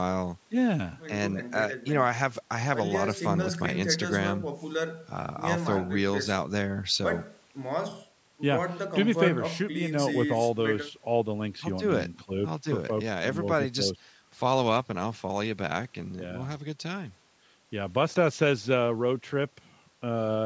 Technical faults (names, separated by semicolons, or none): none